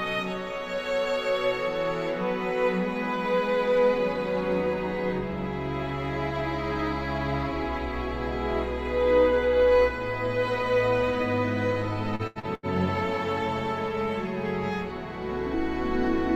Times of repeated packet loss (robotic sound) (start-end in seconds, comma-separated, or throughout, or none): 12.15-12.66